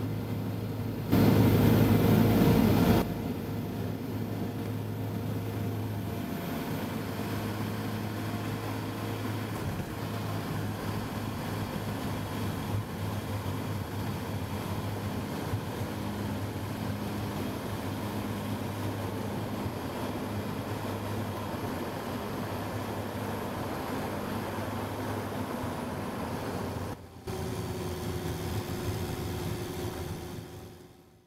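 A gain change was likely applied without a ramp, from one sample to the next. This sudden gain jump lifts sound and background noise together by about 11 dB from 1.12 to 3.02 s, then drops them by about 12 dB from 26.94 to 27.27 s.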